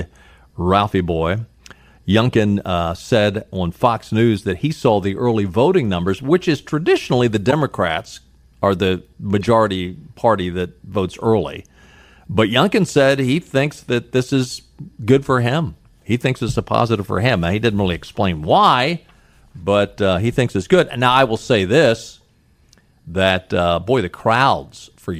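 Three short glitches cut through the speech: a faint one at 4.38 s just before "that he saw the", a much louder one from 7.50 to 7.53 s right after "which is traditionally the", and a moderate one from 9.39 to 9.43 s after "are the". Each is a corrupt frame decoded, heard as a chirp, squeak, blip or burst of noise. Damaged bits in a couple of compressed frames were played as though valid, so misread gains and codes placed energy at the wrong frequencies for that brief span.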